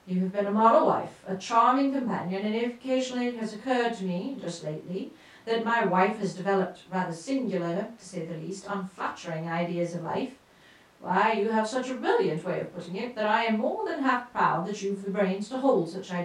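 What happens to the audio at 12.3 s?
Nothing goes wrong at 12.3 s; the speech there comes through intact, with no dropout, click, distortion or other fault.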